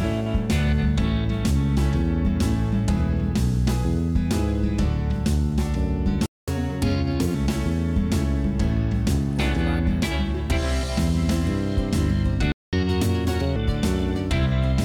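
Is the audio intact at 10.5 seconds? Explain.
Yes, the audio is intact at 10.5 seconds, with no fault to be heard at that moment.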